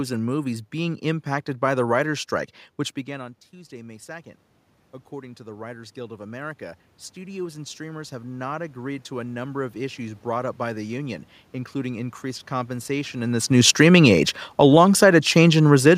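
From 5.09 s to 13.22 s there is automatic gain rising. The input had dropped by about 18 dB. The gain control judged it too quiet and raised its gain by about 12 dB over roughly eight seconds. Voice and room noise swell together until just before "in this".

From 13.5 s to 15.93 s comes automatic gain falling, starting just after "in this". This comes near where the talker moves. The control then lowered its gain by about 5 dB. Speech and background sink together to the end.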